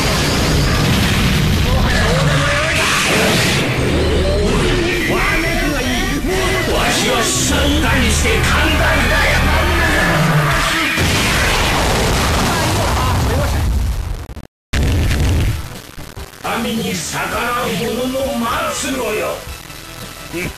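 From 4.93 s to the end, the sound turns coarse and grainy, with distortion riding on the signal at about 20 dB below it. This is likely low bit depth without dither, with samples rounded to roughly 4 bits.

Compressed frames are skipped at 5.76–5.80 s, 11.75–11.81 s, 16.44 s and 17.65–17.69 s. Each drops roughly 50, 150, 100 and 70 ms of audio respectively.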